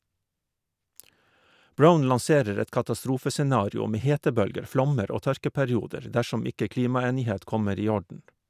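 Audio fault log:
No fault is heard anywhere in this speech.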